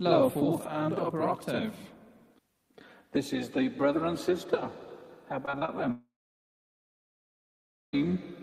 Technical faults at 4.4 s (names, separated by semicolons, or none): none